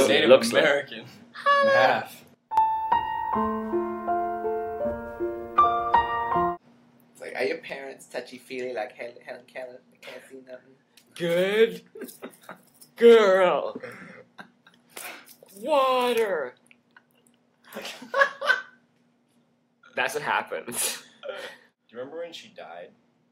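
At 2.35 s the level drops by about 13 dB for roughly a quarter second, recovering at 2.57 s; from 7.70 s it drops by about 8 dB to the end. Sound and noise floor fall together, each step a vertical edge on the waveform, a likely sudden gain jump.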